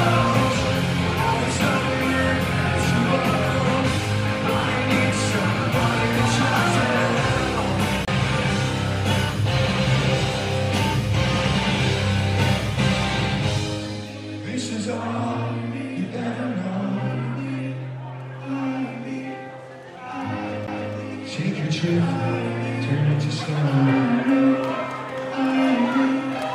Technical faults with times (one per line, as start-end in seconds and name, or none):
8.05-8.08 CD skip
20.67 CD skip